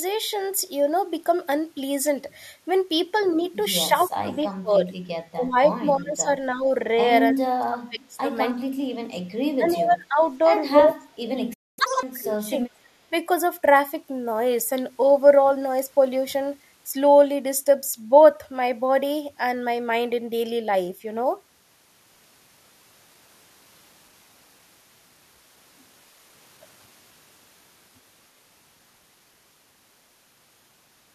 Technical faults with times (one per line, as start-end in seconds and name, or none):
3.89-4.92 speech suppressed in double talk
5.34-8.27 speech suppressed in double talk
8.59-9.21 speech suppressed in double talk
9.58-10.42 speech suppressed in double talk
9.71-9.76 echo leak
10.76-12.75 speech suppressed in double talk
11.53-11.79 playback stall
11.79-12.03 catch-up at higher speed